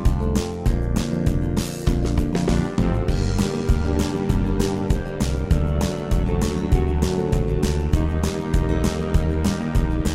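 From start to finish the audio carries overlap-add ripple. It was split into windowed frames and rebuilt with an overlap that fails to sum to constant gain, so the level dips by about 11 dB roughly a hundred times per second, giving a metallic buzz with extra tones around each note.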